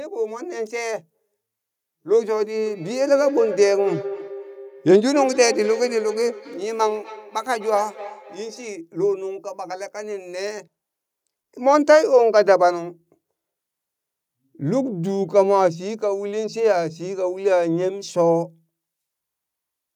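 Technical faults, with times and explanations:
2.66–8.77 s, feedback echo between two devices: a second device in the same room is on the call, playing out what the first microphone sent, and that microphone captures it again. Each echo canceller only subtracts its own playback, so this loop passes straight back into the call. The sound returns as a delayed copy roughly every 0.3 s, at its loudest about 12 dB below the speech, with a thin, ringing quality from the room and loudspeaker path.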